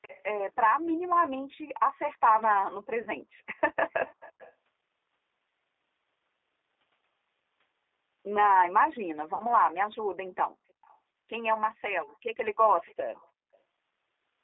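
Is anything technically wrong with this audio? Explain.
Yes, the call audio shows three kinds of fault.

G.729 codec, throughout: the speech passed through a low-rate speech codec, here the G.729A variant, whose character fits 8 kbit/s. Each frame is rebuilt from a vocal tract filter, a pitch predictor and a few pulses rather than from the real waveform. The line is confined to roughly 300 Hz to 3.6 kHz, so the voice is muffled and boxy, with plainly audible roughness and a synthetic, slightly buzzy texture.

VoIP packet loss concealed by the speech codec, at 3.02 to 3.10 s and 9.34 to 9.46 s: audio went missing for 40 ms and then 60 ms, which fits two and three lost packets. With no data, the decoder kept repeating its last pitch and filter at falling gain. Each gap is heard as a stretched, buzzy or noisy smear that fades, and the voice stays weakened and distorted briefly after real audio returns.

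Echo leak, at 0.02 to 0.23 s, 3.55 to 4.53 s, 10.27 to 10.33 s, 10.82 to 10.97 s, 12.07 to 12.17 s and 12.85 to 13.58 s: the far end was likely on a loudspeaker, and its echo canceller let part of the signal through. A faint copy of the speech returns 343 ms late, at about 25 dB below the voice in the first two stretches, about 35 dB down around 10 to 11 s, and about 30 dB down after 12 s. It sounds like a delayed copy trailing the speech.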